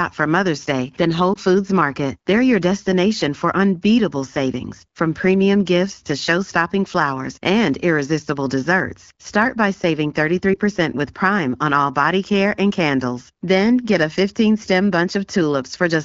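At 1.33 to 1.38 s there is a lost AMR speech frame. A radio error corrupted the frame, so the decoder filled the gap by repeating the last good pitch and vocal tract settings at lower gain. It is heard as a brief dip or warble. The gap fits a single 20 ms frame. A second lost frame follows at 10.53 to 10.58 s, just after "by saving". It sounds the same. The AMR wideband (HD Voice) codec underneath adds only light coding colour, which fits a rate around 12.65 kbit/s.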